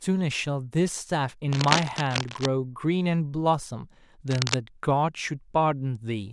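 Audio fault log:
1.51–2.46 s and 4.28–4.55 s, cable scratch noise: likely a worn cable or connector shifting its contact resistance, adding dense, uneven scratchy bursts only slightly below the speech level.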